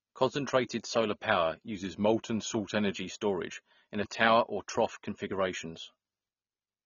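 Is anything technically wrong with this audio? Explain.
Yes, there are two faults. Throughout, the speech sounds dull and smeared, with fizzy sibilants, likely from AAC compression at around 24 kbps. Unlike plain low-pass filtering, it adds warbling texture.

From 1.75 to 2.93 s, between "solar power" and "storage in a tower", speed drops 5.3% and pitch falls 94 cents together, then snaps back. This is likely a drift correction step. Unlike gradual wow, it shifts abruptly.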